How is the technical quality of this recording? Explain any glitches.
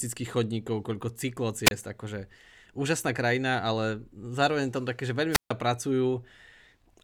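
The recording has two wireless microphone squelch dropouts. In each, the analogue FM radio link from the microphone faded far enough that the receiver's squelch shut the output. The first, from 1.65 to 1.71 s, falls between "chodníkov koľko" and "akože úžasná": a short burst of hiss, then a gap of about 29 ms. The second, from 5.31 to 5.51 s, mutes for about 145 ms, a hole of near silence before the speech resumes.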